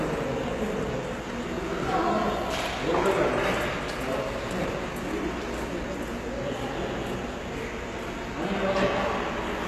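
Throughout, the treble is plainly gritty and metallic, with nothing above 12.3 kHz, likely HE-AAC compression rebuilding copied high bands, consistent with a very low bitrate near 16 kbps.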